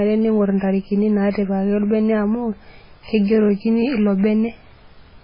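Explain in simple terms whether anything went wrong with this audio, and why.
Throughout the speech, the sound is dull and watery, with a swirly, metallic edge on s sounds and nothing above 5.3 kHz. The likely cause is heavy MP3 compression: short of data, the encoder chopped off the treble and let faint detail flicker.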